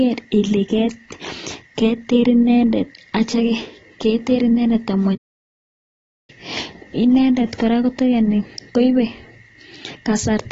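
From start to end the speech carries plainly audible AAC compression: dull, smeared and warbling, with sibilants turned fizzy. The likely cause is an AAC-LC encode starved of bits, which fits roughly 24 kbps. A spectrogram shows nothing above 7.6 kHz.

At 5.15 s a playback stall cuts the sound off mid-flow for 1.13 s, resuming at 6.30 s. The player likely ran short of data and output silence until it caught up. The waveform drops to a flat line across that span.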